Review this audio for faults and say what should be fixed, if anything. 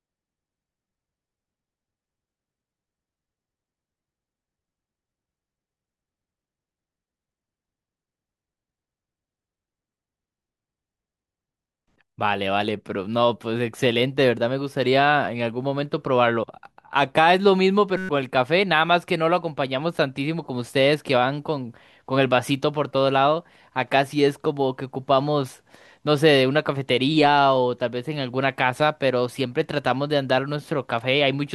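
At 17.97 to 18.09 s the playback system stalled while the audio hardware kept replaying the same small ring buffer, a system hang loop. A 5.33 ms slice repeats about 22 times, which fits a 256-sample buffer, so instead of a stutter the sound collapses into a steady 188 Hz buzz for roughly a tenth of a second, and the audio that should have played in that gap is lost. Prevent it by running the audio thread at real-time priority, keeping blocking work off it, and having the driver output silence when the buffer underruns instead of replaying stale data.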